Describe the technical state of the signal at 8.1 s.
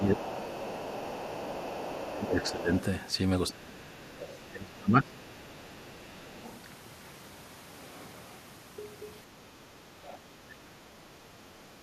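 At 8.1 s the speech signal is intact, with no audible fault at that moment.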